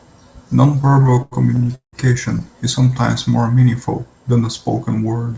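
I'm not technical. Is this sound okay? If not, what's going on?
No. Between 0.82 and 1.95 s there are repeated stalls (stutter): the audio arrived late, so the receiver kept running dry and stretched the last sound to cover waits of up to 176 ms. Nothing is lost, but that stretch drags and stutters.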